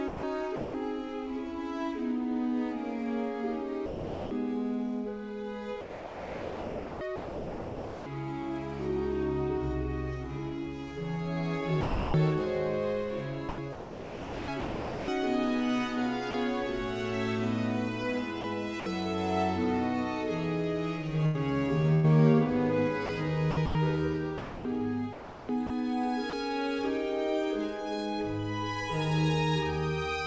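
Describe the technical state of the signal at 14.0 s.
At 14.0 s the sender's voice detector is likely toggling transmission on and off, from 13.49 to 16.34 s, so about 1.35 s of sound is swapped for generated comfort noise. The result is choppy audio.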